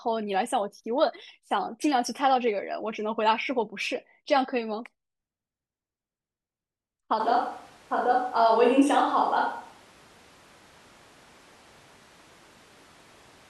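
At 7.2 s the speech turns abruptly roomy and hollow and stays that way to the end, a switch to a distant microphone, most likely because the close microphone's signal dropped out and a farther one took over. Level holds roughly steady, but the bass thins and a room-noise floor appears about 30 dB below the speech. A spectrogram shows a sudden low-frequency loss and smeared reverberant tails filling the gaps; the waveform's pauses no longer fall to silence.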